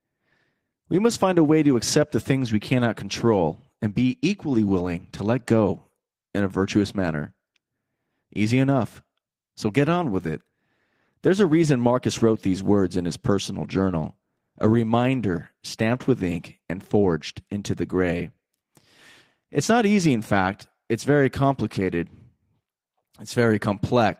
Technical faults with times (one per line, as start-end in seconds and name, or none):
none